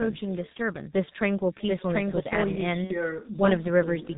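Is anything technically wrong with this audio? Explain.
Yes, three faults are audible in this speech clip.

Throughout, there is echo with no canceller. Every phrase returns about 0.4 s later as a quiet, thin copy, about 26 dB below the direct speech. It sounds like the far end's loudspeaker feeding its microphone with nothing removing it. On a spectrogram, each syllable's pattern repeats faintly, shifted right.

Also throughout, the G.723.1 codec at 6.3 kbit/s damages the sound heavily. It discards everything above 4 kHz and tracks the voice coarsely, so speech sounds muffled and hoarse with smeared consonants. A spectrogram shows an empty band above 4 kHz and blurred formants and fricatives.

From 2.84 to 3.09 s, there is VoIP packet loss concealed by the speech codec. Roughly 60 ms of audio is missing, which fits two lost 30 ms frames. The decoder extends the last pitch and filter with falling gain, producing a fading buzzy tone or coloured noise. 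Because each frame builds on the previous one, the voice stays weak after the gap. The waveform shows a decaying envelope.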